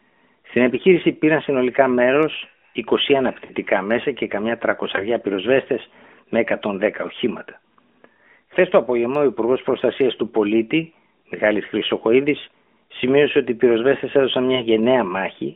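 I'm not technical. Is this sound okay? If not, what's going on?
No. There are lost AMR speech frames: radio errors corrupted bits of the mobile signal, so the phone patched the gaps by stretching the last good sound. You hear the voice drawn out and fading at 3.46–3.53 s (before "μέσα και καμιά"), and brief dips or warbles at 4.96–5.05 s (before "πυροσβέστες με") and 14.56–14.63 s (after "ότι οι πυροσβέστες έδωσαν").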